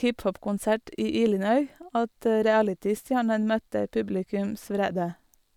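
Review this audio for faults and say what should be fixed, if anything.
Nothing to fix: no faults are audible anywhere in the speech, so no corrective action is needed.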